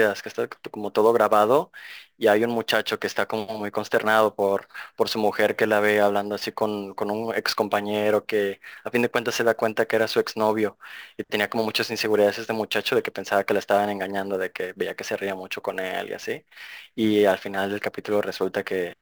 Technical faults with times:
0.00-19.02 sample clock jitter

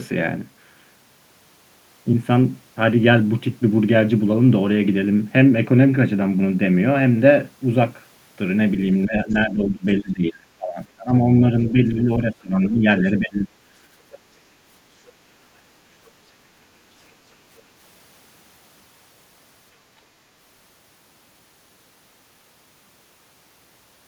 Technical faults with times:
9.05-11.42 speech suppressed in double talk
9.31-9.35 other side's voice leaking through
11.72-13.51 speech suppressed in double talk
14.11-14.18 other side's voice leaking through
16.06-16.11 other side's voice leaking through
17.57-17.62 other side's voice leaking through

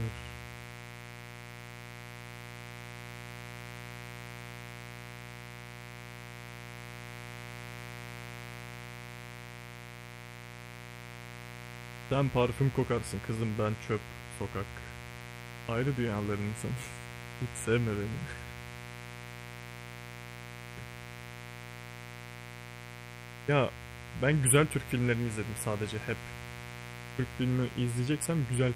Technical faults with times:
0.00-28.76 mains buzz

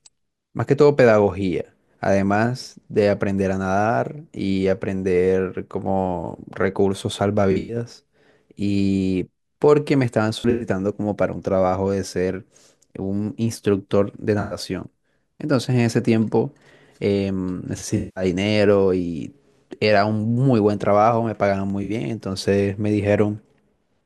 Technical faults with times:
7.51-7.76 AAC frame loss with concealment
10.39-10.66 AAC frame loss with concealment
14.40-14.57 AAC frame loss with concealment
17.97-18.24 AAC frame loss with concealment
21.70 block of digital silence
21.83-21.90 AAC frame loss with concealment

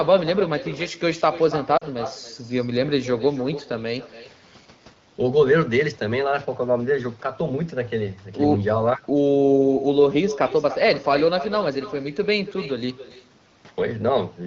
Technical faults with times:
0.00-14.46 echo with no canceller
1.77-1.84 lost AMR speech frames

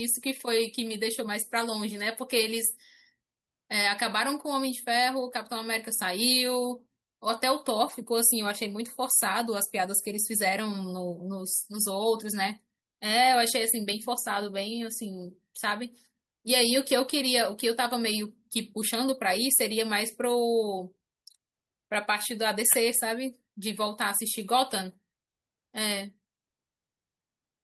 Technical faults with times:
7.89 lost packet rebuilt from error correction

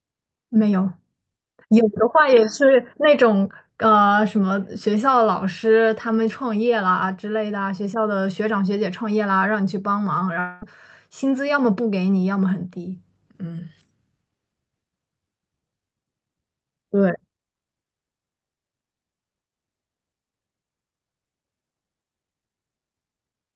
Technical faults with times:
10.39-10.63 long network dropout

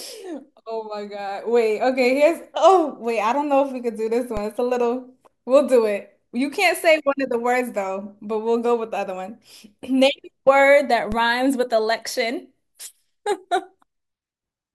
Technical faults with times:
4.37 DC step
11.12 DC step

